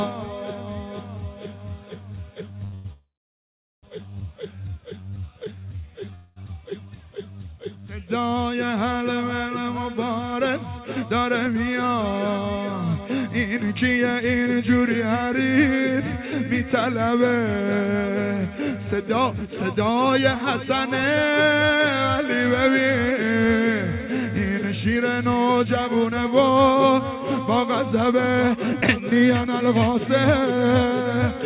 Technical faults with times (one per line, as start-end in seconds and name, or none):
2.64-2.74 short stall from a late packet
2.74-3.85 call audio freeze
5.09-6.11 jitter buffer slow-down
6.15-6.38 call audio freeze
9.64-14.84 jitter buffer speed-up
19.20-28.95 jitter buffer speed-up